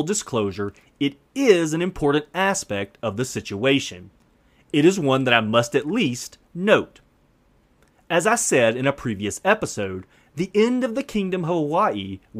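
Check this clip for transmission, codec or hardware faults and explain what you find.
Checking this clip turns up nothing to explain, as it has no faults.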